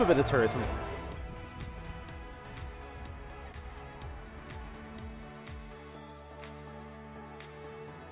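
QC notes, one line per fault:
3.52–3.56 s, short concealed packet loss: about 20 ms of audio failed to arrive at the decoder in time, and the receiver bridged the gap by extending the preceding sound for roughly 15 ms before crossfading back into the real signal. The result is a brief smear or wobble lasting a few hundredths of a second. The surrounding call audio stops sharply at 4 kHz, which points to a G.711-type narrowband codec.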